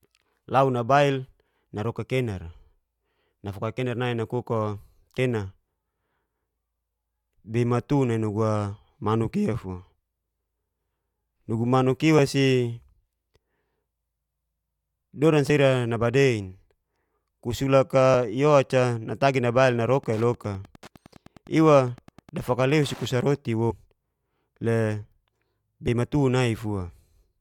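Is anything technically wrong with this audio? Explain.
Yes. Compressed frames are skipped at 5.18, 12.18, 15.49, 18.14, 23.70 to 23.72 and 25.88 s. Missing or rejected frames leave the decoder jumping ahead, so the speech loses a few to a few tens of milliseconds, and around 200 ms at 23.7 s.

Wi-Fi interference runs from 20.00 to 23.37 s. A nearby radio's beacon, every 102.4 ms, is being rectified by the audio circuit, producing a steady tick about ten times a second, roughly 25 dB below the speech.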